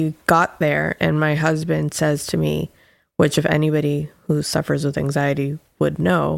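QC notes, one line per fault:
Nothing to flag on this one, so no fault lines to log.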